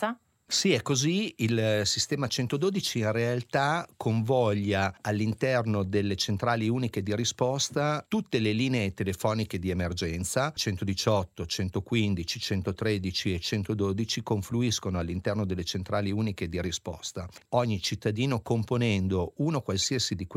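At 5.19 s there's a corrupt frame decoded, a tiny blip where a damaged compressed frame got played anyway. Flipped bits scramble the frame's gains and codes, so energy lands at the wrong frequencies for that moment. The one at 13.25 s is the same: faint, around -35 dBFS. The last, from 19.82 to 19.85 s, is much louder, near -15 dBFS, a brief squeaky burst. Each sounds like a single bad frame.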